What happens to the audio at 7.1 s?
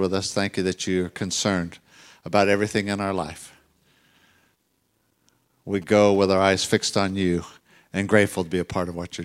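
GSM signalling bursts end at 7.10 s, having run from 5.82 s, just before the speech continues with "you and". A nearby 2G phone is exchanging short signalling bursts with the network, and the audio circuitry rectifies that radio energy into sound. The result is a galloping dit-dit-dit of brief buzzes at a 217 Hz repetition rate, sitting about 25 dB below the speech.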